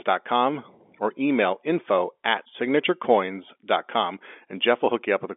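No technical faults are audible.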